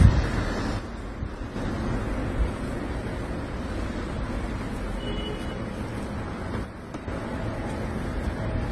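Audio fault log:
Throughout: transcoding between lossy codecs. Nothing above 12 kHz, with artefacts of differing character layered together, likely from a chain of low-bitrate codecs ending in Opus.
0.79–1.56 s and 6.65–7.08 s: one channel drops out. Shared content falls abruptly by about 6 dB, then recovers, likely because one stereo channel vanished before mono summing.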